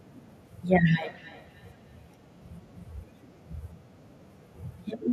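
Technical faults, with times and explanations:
1.00–3.12 s, feedback echo between two devices: speech returns roughly every third of a second, at about 26 dB below the voice. A second device replays this microphone, which its canceller cannot remove.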